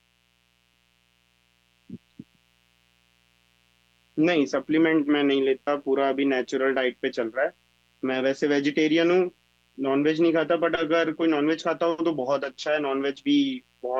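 Mains buzz runs under the speech for the whole clip, a steady, raspy tone built on 60 Hz harmonics extending well into the kilohertz range. Sharp switching spikes from a dimmer, rectifier or missing shield entered the audio path, sitting roughly 40 dB below the speech.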